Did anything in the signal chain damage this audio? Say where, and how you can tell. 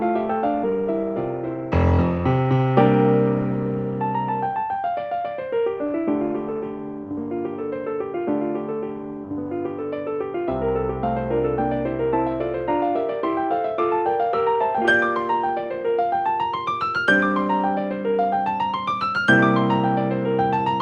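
Yes, there is a skip ahead at about 0.63 to 0.65 s, in the network and jitter-buffer stage of the call path. Playback jumps forward with no gap or fill, and around 0.4 s of sound is missing. The material on either side is butted almost directly together. This happens when a stretch of packets is lost in transit or discarded after the jitter buffer overflows. The buffer then resumes from later audio that was already waiting.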